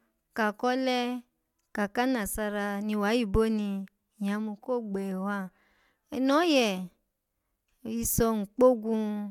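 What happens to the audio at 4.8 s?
Nothing goes wrong at 4.8 s: the speech carries on intact through that moment, with no dropout, click or other fault to be heard.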